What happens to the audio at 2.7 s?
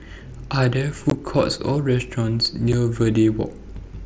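At about 2.73 s there's unconcealed Bluetooth headset packet loss: roughly 7.5 ms of speech, which fits a single dropped packet between headset and phone, never arrives and is replaced by silence or an idle pattern. You hear a tiny hole with abrupt edges in the mSBC wideband stream.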